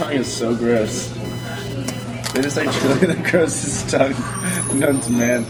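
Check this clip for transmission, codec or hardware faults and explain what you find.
There's one hardware fault: computer activity noise, running from the start of the clip to about 2.75 s. The computer's processor, graphics card or mouse shifts its load, and that drags on the ground the audio circuit shares with it, so interference leaks into the signal. You hear it as a pulsing buzz around 1 kHz, sitting roughly 20 dB under the audio. It rises and falls with what the machine is doing rather than with the sound itself.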